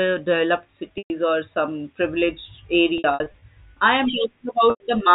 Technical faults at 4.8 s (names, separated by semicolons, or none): packet loss with pitch repetition